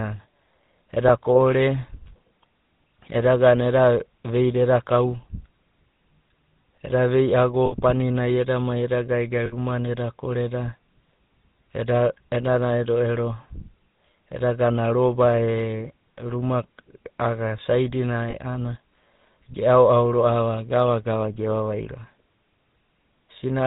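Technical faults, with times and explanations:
Throughout, GSM full-rate codec: the 13 kbps coder rebuilds the voice from a vocal-tract model and sparse pulses, so it sounds plainly buzzy and gravelly, with nothing above 4 kHz.
0.0 to 3.83 s, sample clock jitter: the converter clock wobbles by a fraction of a microsecond, adding a faint roughness, very low, well under the speech, that grows on loud, bright bits and disappears in pauses.
7.66 s, 9.46 s and 18.3 s, lost GSM frames: 60 ms, 60 ms and 40 ms of frames went missing, and the decoder repeated the last good one, leaving a brief rough, metallic ring.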